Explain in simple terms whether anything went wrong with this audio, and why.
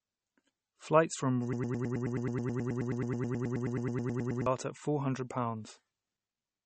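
Yes, two things went wrong. The speech has a watery, swirly sound and no treble above about 8.4 kHz. That points to heavy MP3 compression, likely squeezed to a very small file.

From 1.53 to 4.46 s there is a broken-record loop. A tiny piece, about 0.11 s long, repeats over and over. The speech meant for that time is lost, likely because playback or streaming stalled.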